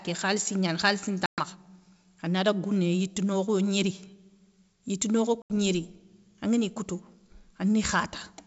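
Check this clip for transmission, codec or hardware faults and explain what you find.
Two dropouts from packet loss on an ADPCM call, at 1.26 to 1.43 s (about 120 ms lost, several packets) and 5.42 to 5.53 s (80 ms). Each is a silent hole with abrupt edges, a flat line in the waveform and a blank vertical band on the spectrogram. The speech then resumes slightly distorted because the decoder's predictor and step size have drifted, and it settles within tens of milliseconds. The G.722 wideband coding itself is clear up to 7 kHz.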